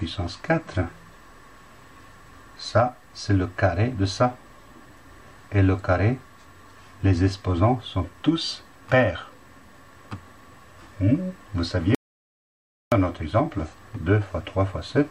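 From 11.95 to 12.92 s, an audio dropout to silence removes about 0.97 s: silence with no room tone, likely from a briefly lost input.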